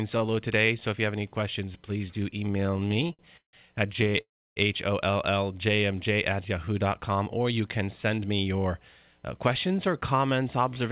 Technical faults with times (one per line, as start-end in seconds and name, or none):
2.52-3.55 repeated stalls (stutter)
3.93-4.21 repeated stalls (stutter)
4.21-4.58 call audio freeze
6.92-8.33 jitter buffer speed-up